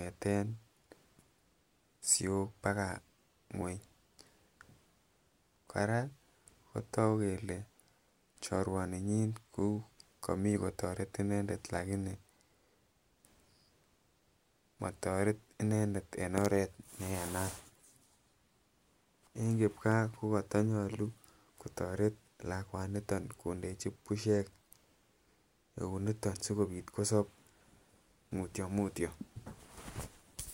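A speech recording with no technical faults to report. Nothing heard in it points to a problem anywhere in the recording or playback chain.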